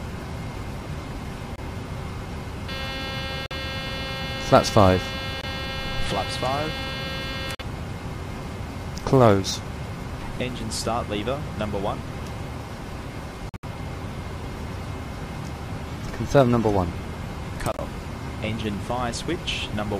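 Sharp-edged holes of silence open at 1.56, 3.46, 5.41 and 7.55 s, each only 40 to 60 ms long. These are corrupt frame muted events: damaged compressed frames were rejected by the decoder and replaced with silence. The holes are roughly one or two frames wide. Unlike a dropout that skips material, the sound resumes exactly on time afterwards, so nothing is lost except the muted stretch.

A longer hole of the same kind runs from 13.49 to 13.64 s, about 150 ms, where several consecutive frames were discarded. It starts abruptly, and the timing stays intact.

From 15.88 to 16.85 s the whole sound runs about 5.3% fast and sits about 90 cents sharp, nearly a semitone. Then it snaps straight back. This is a drift correction step, likely from clock-matching software briefly speeding playback to drain its buffer. Speed and pitch move together as one flat plateau, which separates it from the continuous wavering of wow or flutter.

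At 17.72 to 17.81 s one more corrupt frame muted gap appears, about 90 ms, spanning roughly three frames. It cuts in just as suddenly, and the sound carries on afterwards with its timing unchanged.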